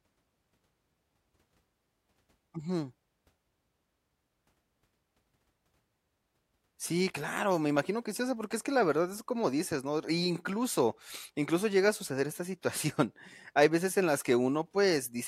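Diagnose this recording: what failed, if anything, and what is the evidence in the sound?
Nothing in this speech recording points to a failure at any stage, so there's no fault to diagnose here.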